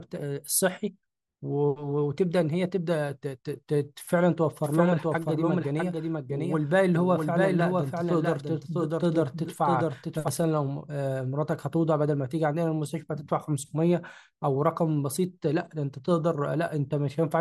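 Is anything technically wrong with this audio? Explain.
Yes. From 4.64 to 10.28 s, a copy about 5 dB quieter trails about 0.7 s behind and cuts in and out abruptly. This is a doubled audio track, likely from a second, slower capture path.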